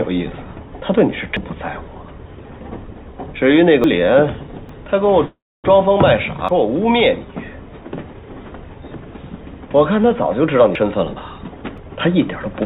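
At 1.37, 3.84, 4.69 and 6.49 s there are sudden jumps ahead, each skipping roughly 100 to 300 ms with no silence. This is a dropped buffer (overrun), likely from samples overwritten before being read. From 5.26 to 5.66 s a call audio freeze fills about 380 ms, fading into roughly 280 ms of silence. It is likely caused by delayed packets emptying the jitter buffer. Unlike the overrun skips, nothing is lost and the sound resumes where it stopped. From 10.41 to 12.62 s a jitter buffer speed-up runs the sound at about 111% with the pitch unchanged, trimming around 300 ms. Two more overrun skips at 10.75 and 11.78 s land inside that hurried stretch, each an abrupt jump rather than a smooth quickening. Throughout, the G.711 mu-law call path leaves nothing above 4 kHz.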